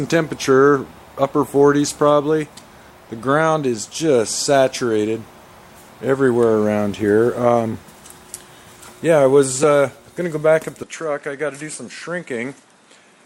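The audio has an overlap between stream segments at 9.63 s: two segments' timestamps collide, so about 6 ms is trimmed and the waveform jumps in a tiny skip. From 10.83 s to the end the sound abruptly narrows, with nothing above 11.4 kHz, a level drop of roughly 5 dB and a new noise floor well below the signal, with no gap at the change, likely an input switched to a poorer device.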